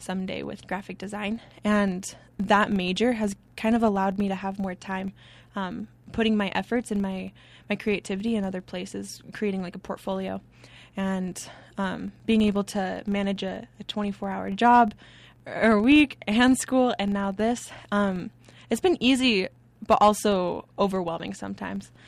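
From start to finish there's a low buzz riding on the speech at 25 Hz, and that's the classic filter restarted on every block. The filter drops its memory at each block boundary and begins again from silence, so every block opens with a tiny transient. Ticks at 25 per second fit blocks of 40 ms. It swells when the talker gets louder and sinks in the quieter stretches.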